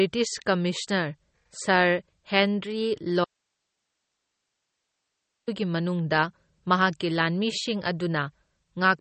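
From the start the speech carries MP3 compression damage: the sound is plainly watery and swirly, nothing is present above about 8.4 kHz, and sibilants turn metallic, which points to a likely low bitrate around 32 kbps, where weak frequency lines are dropped frame by frame.

At 3.25 s the speech cuts out abruptly and returns at 5.48 s, a gap of 2.23 s holding only hiss roughly 55 dB below the signal. This audio dropout to a faint residue likely comes from the source being lost while the downstream path stayed live.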